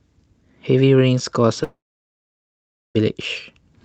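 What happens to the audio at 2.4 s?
At 2.4 s the audio sits inside what is likely a long network dropout, running from about 1.63 s to 2.97 s. For roughly 1.3 s no audio reached the receiver, so it briefly stretched the last sound into a fading buzz and then gave up. By 2.4 s only silence or a faint steady noise remains. The audio returns near 2.97 s with the missing stretch simply gone.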